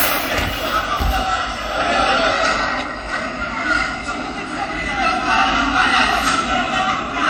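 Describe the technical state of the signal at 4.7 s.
At 4.7 s the sound carries audible codec damage. It runs through the whole clip, not just this moment. The smearing and washy texture point to WMA compression as the likely cause, at a low rate that fits about 48 kbps. This transform codec spreads quantisation noise across long blocks of tens of milliseconds. Weak spectral lines get zeroed. The result is ringing and a hiss that breathes with the sounds. Content still reaches about 20.1 kHz.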